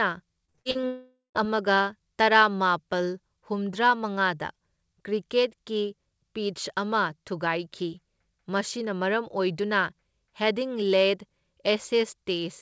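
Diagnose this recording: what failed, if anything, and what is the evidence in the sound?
The network is where this failed. From 0.46 to 0.85 s the speech turns choppy and robotic, with repeated packet loss (robotic sound) across six short gaps, none longer than 40 ms. Each gap is patched by stretching the previous sound, so about 43% of that span is concealed rather than received. Unlike a single long dropout, the audio keeps returning between holes, giving a rapid stutter instead of a fade.

Right after, from 0.87 to 1.37 s, roughly half a second of audio is lost in a long network dropout. The concealment first extends the last sound as a decaying buzz or hiss, then gives way to silence for about the final 0.13 s before the speech resumes with that stretch missing. The likely cause is a burst of lost or badly late packets. It differs from the earlier robotic section because nothing real arrives in between. 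Above both, the G.722 call path keeps the band below 8 kHz.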